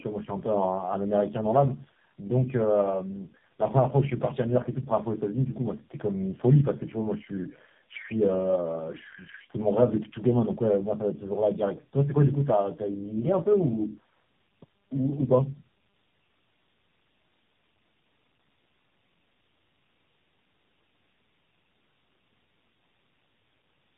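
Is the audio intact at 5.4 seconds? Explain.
No. At 5.4 seconds, as across the whole clip, the speech sounds rough, muffled and warbly, with nothing above 3.8 kHz. This is tandem speech coding: the signal was decoded and re-encoded by several speech codecs in turn, each compounding the previous one's damage.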